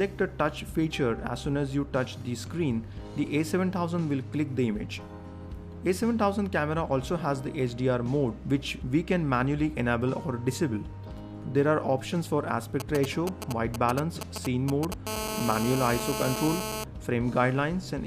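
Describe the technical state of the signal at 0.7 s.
At 0.7 s the signal is intact, with no dropout, distortion or other audible fault at that point.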